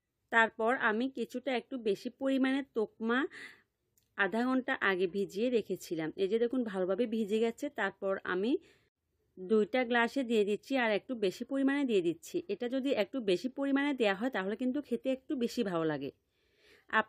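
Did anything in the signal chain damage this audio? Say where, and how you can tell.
No, nothing damaged it.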